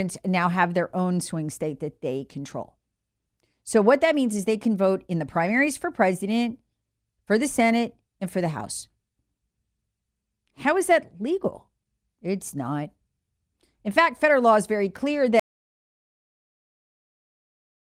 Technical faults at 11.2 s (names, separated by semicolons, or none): none